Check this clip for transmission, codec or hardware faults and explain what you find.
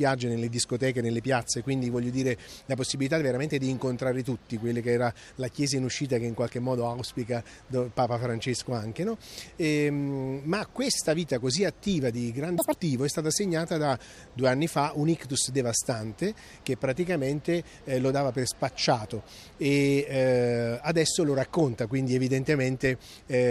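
One fault turns up. From 12.58 to 12.73 s the audio is read two samples at a time, playing at double speed: the reader treats each pair of samples as one frame, so the sound runs twice as fast and an octave higher. On a spectrogram, that 0.15 s stretch shows content shifted upward; the waveform looks compressed in time, its cycles packed twice as tightly.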